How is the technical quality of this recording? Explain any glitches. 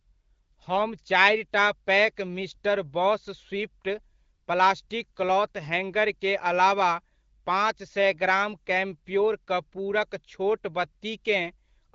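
No technical faults are audible.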